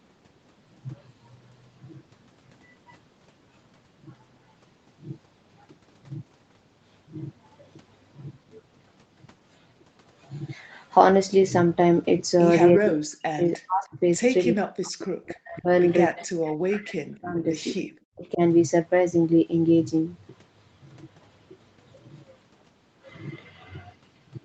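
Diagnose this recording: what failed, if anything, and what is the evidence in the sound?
Speech suppressed in double talk, at the call-processing stage. The speech sinks by up to about 40 dB at 12.79–13.45, 13.65–14.01, 14.49–15.7, 16.12–17.47 and 17.85–18.4 s. The likely cause is an echo canceller that heard both sides at once and turned both down.

Echo leak, also in call processing. Short scraps of a delayed copy appear at 13.53–13.58 and 17.11–17.19 s. They trail the original by 304 ms and sit roughly 25 to 30 dB below the speech. Loudspeaker pickup likely slipped past the far end's echo canceller and came back.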